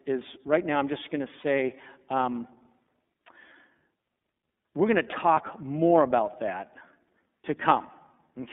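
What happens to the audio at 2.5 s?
At 2.5 s, as across the whole clip, it's the iLBC codec: speech held to 200 Hz–3.6 kHz, each frame coded independently, sounding plainly rough and synthetic.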